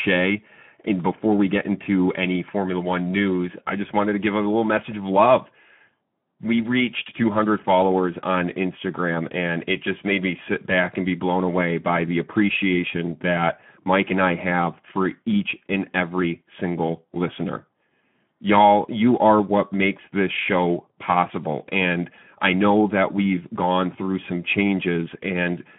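From start to finish the speech carries plainly audible Speex codec damage. With too few bits left to code the excitation, voiced sounds come out hoarse and grainy, at a rate that fits roughly 11 kbps. The band is confined to 150 Hz to 3.4 kHz. On a spectrogram, energy stops sharply at 3.4 kHz and below 150 Hz, and the harmonic stripes look smeared and speckled with noise rather than cleanly drawn.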